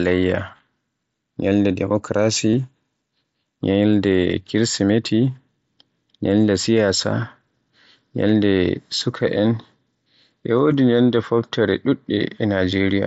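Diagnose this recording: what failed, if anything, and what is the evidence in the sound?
Concealed Bluetooth headset packet loss on the wireless link, at 0.57–0.59 s and 2.52 s: gaps are refilled with copied recent waveform, showing as brief repeating cycles and frozen spectrogram harmonics.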